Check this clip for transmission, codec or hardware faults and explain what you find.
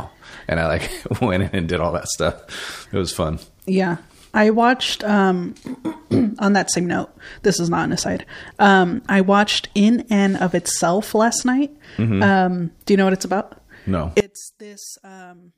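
One fault appears near the end of the speech. From 14.20 s to 15.57 s the speech suddenly collapses by about 23 dB into a faint residue, with its centred body gone. The likely cause is one channel inverted: reversed polarity on one side makes the shared centre content cancel when the channels are summed to mono.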